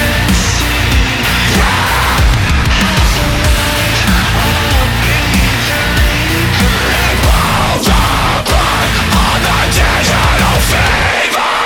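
There are no technical faults to describe in time order, since none can be heard anywhere in the audio.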